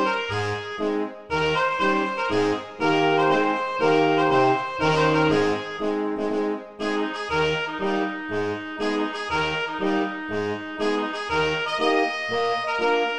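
Nothing stood out as a technical problem on listening to this audio.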